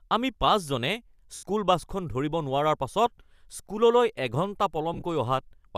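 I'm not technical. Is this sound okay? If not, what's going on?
No. The speech has two brief hissy smears, at 1.35 to 1.43 s just before "বাছখন ধৰিব", and at 4.94 to 5.03 s just after "স্কুললৈ এঘণ্টা", where the second smear is broken into short bits of about 20 ms. These are lost LE Audio frames: Bluetooth dropped pieces of the stream, and the decoder patched each gap with noisy, fading guesses.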